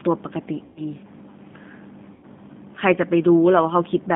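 Throughout, the speech carries the rough, slightly synthetic texture of a G.729 codec, consistent with the 8 kbit/s G.729A variant. The signal is held to roughly a 150 Hz to 3.6 kHz band, and the coarse pulse-based excitation is plainly audible as grainy, buzzy colouring.

VoIP packet loss concealed by the speech codec occurs at 0.64 to 0.82 s, with about 120 ms of audio missing, which fits four lost packets. It recurs at 2.14 to 2.26 s, with about 90 ms missing, suggesting three packets. In each gap the decoder extends its last pitch and filter state into a fading buzzy tone or coloured noise. The following speech returns weakened and smeared until the predictor recovers.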